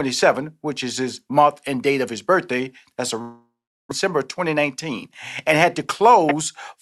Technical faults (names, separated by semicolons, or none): long network dropout; jitter buffer speed-up